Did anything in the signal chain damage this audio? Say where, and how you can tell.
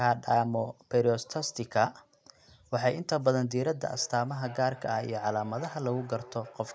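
Yes. From 3.93 s to the end of the clip, the speech comes back as a thin, ringing repeat roughly every third of a second, peaking at about 19 dB below the direct speech. This is feedback echo between two devices, a fault in the call stage. A second device in the same room plays this microphone's signal aloud, and the microphone picks it up again. The echo canceller only removes its own device's playback, so the repeat survives.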